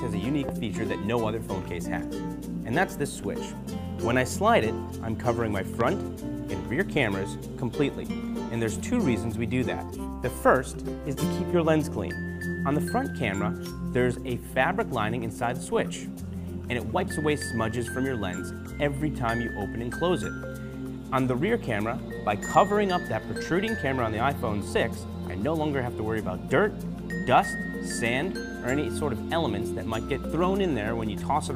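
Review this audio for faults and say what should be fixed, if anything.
Two loud pops sit on top of the audio, at 0.49–0.51 s and 5.81–5.83 s, each a single sharp pulse peaking about 15 dB above the signal. These are likely voltage transients from a plug, switch or static discharge, shaped by downstream circuitry. Secure connectors, ground equipment properly, and mute inputs before switching.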